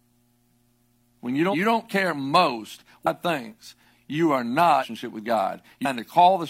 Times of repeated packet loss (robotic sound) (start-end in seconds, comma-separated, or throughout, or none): none